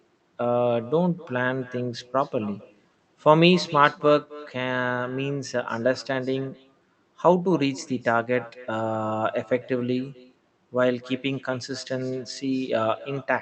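From start to finish the speech carries an echo with no canceller: the far end's loudspeaker output re-enters its microphone and returns after roughly a third of a second, about 20 dB below the talker, as a faint, thin copy trailing every phrase through the Opus call path, whose band stops near 8 kHz.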